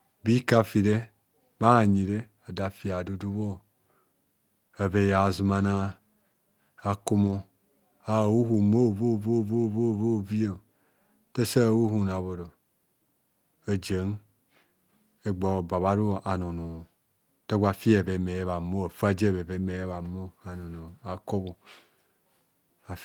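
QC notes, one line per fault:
7.23–7.33 s and 19.91–20.01 s, lost packet rebuilt from error correction: the sound briefly turns rougher and noisier with no dropout or silence. Each time, packets went missing, and the decoder played the lower-bitrate copies carried inside the following packets instead. About 60 ms of audio per event comes from those coarse copies, which fits three 20 ms packets, so the stream stays continuous but loses detail for that moment.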